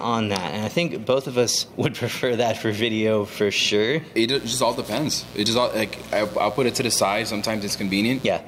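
From 4.35 s to 8.31 s a steady, raspy mains buzz sits roughly 20 dB below the sound. Switching spikes leak in twice per 60 Hz cycle. A spectrogram shows stacked horizontal lines at multiples of 60 Hz, climbing into the kilohertz range.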